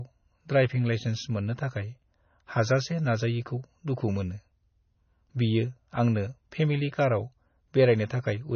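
MP3 compression runs throughout the speech, likely the cause of its heavily degraded sound. Nothing survives above 6.6 kHz, a fixed treble cut that fits a very low bitrate near 24 kbps. Weak frequency lines blink on and off between frames, giving a watery, swirling texture and chirpy s sounds.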